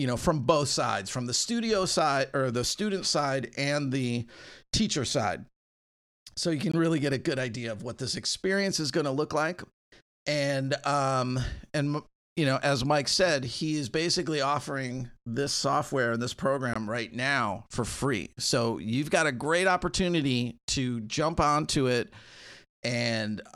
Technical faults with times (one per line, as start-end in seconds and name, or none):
6.72 gap between chunks
16.74 gap between chunks